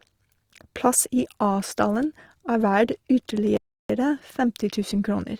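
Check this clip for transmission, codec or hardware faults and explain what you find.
Two faults are audible: codec damage across the whole recording and one brief dropout.

Opus compression, throughout. The likely cause is an Opus encoder in its music (CELT) mode, starved of bits at a rate that fits around 24 kbps. It preserves the energy in each band but cannot code the fine detail, so it fills the gaps with folded or noise-like content. The bandwidth stays wide, reaching about 20.4 kHz, yet the speech sounds grainy and rough rather than swirly, and the damage is plainly audible.

Playback stall, from 3.57 s to 3.90 s. The player most likely ran short of data or had its output thread blocked, and it produced nothing until it caught up. The speech cuts out mid-flow into silence for about 0.33 s, a gap long enough to be clearly noticed, before the sound resumes.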